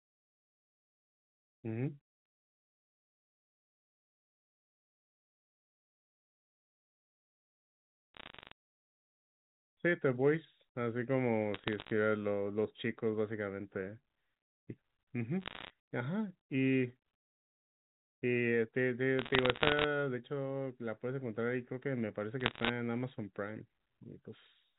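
Telephone speech carries bursts of bit errors on a digital phone line at 8.15–8.52, 11.54–11.91, 15.42–15.70, 19.19–19.84 and 22.40–22.69 s. Each flipped bit corrupts one sample, and hits on high bits or on the sign of loud samples produce sharp ticks. At around half a percent of bits damaged, these ticks form crackle over the G.711 telephone-band sound, which is cut off above 4 kHz.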